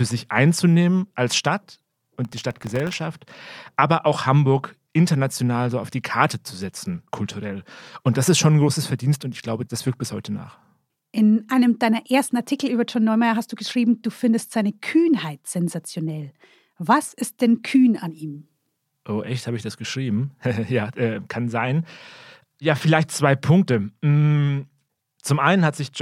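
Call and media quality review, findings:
Processor overload crackle, 2.25 to 2.95 s. Gritty tearing over speech. Audio processing thread missing dozens of tiny-buffer deadlines, replaying stale audio with hard edges.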